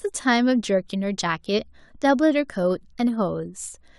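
Just a bit of speech with nothing technically wrong to point out anywhere in it.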